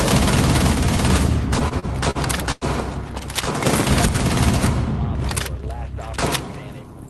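Repeated stalls (stutter) run from 1.59 to 2.64 s: the audio hitches six times as packets arrive late and the receiver's jitter buffer keeps running dry. Each time, the last sound is stretched to cover the wait, about 0.22 s in all and roughly a fifth of that stretch, with the longest hold at 100 ms, faded as it goes. Nothing drops out, but the passage drags and stumbles. The band-limited, coded sound of the call path, topping out near 12 kHz, is consistent with Opus at a modest bitrate.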